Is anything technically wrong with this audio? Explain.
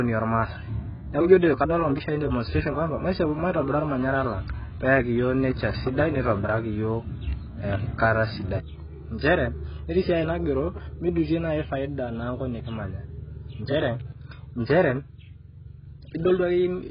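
Yes, there are two problems.

AAC compression affects the whole clip. The speech is dull and smeared, with nothing above 5 kHz and a warbling, fizzy texture on sibilants and held vowels. This heavy damage is likely from AAC-LC encoding at a very low bitrate, around 12 kbps. The encoder quantises each frame's frequency lines so coarsely that it lowers the cut-off and leaves gaps in the spectrum, which produces the swirling, watery grain.

Word clock ticks run from 0.65 s to 16.52 s. They are sharp clicks roughly every 0.7 s, about twenty of them, with uneven strength. The receiving device runs on its own clock, which is not locked to the sender's and is off by something like 30 ppm. Each time the two clocks drift past one sample, a single sample is dropped or repeated. That small break in the waveform causes each tick and sets their steady rate.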